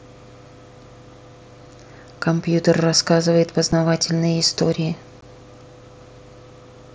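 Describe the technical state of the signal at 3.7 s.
Unconcealed Bluetooth headset packet loss at 3.72 s: a gap of about 7.5 ms, which fits one lost voice packet between headset and phone, was filled with silence or an idle pattern rather than patched over. It sounds like a brief hole with abrupt edges.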